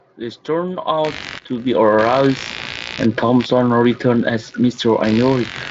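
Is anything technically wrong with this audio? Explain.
Yes. Computer activity noise runs from 1.04 s to the end: processor and peripheral load disturbs the shared audio ground, adding a buzzy pulsing near 70 per second, roughly 15 dB below the speech.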